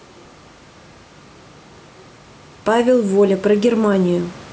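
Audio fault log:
throughout, gain pumping: the gain swings by about 5 dB, bringing loud and soft parts closer in level and leaving the level squashed. The likely cause is microphone gain set far too high, with a fast limiter clamping down on each peak.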